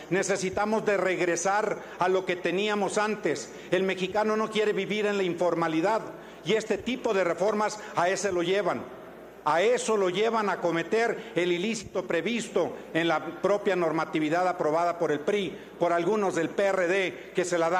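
No faults detected anywhere in the clip.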